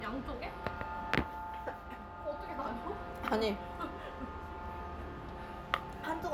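No technical faults can be heard anywhere in this clip of sounds.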